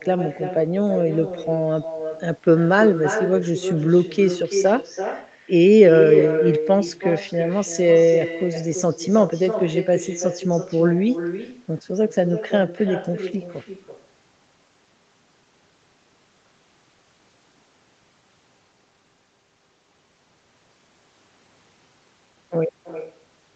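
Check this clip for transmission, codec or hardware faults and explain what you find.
One fault runs through the whole clip: an echo with no canceller. The far end's loudspeaker feeds the talker's speech back into its microphone, and nothing removes it. So every phrase returns about 10 dB quieter, roughly a third of a second later, and thinner. Unlike room reverberation, which smears each sound continuously, this repeat arrives as a separate delayed copy.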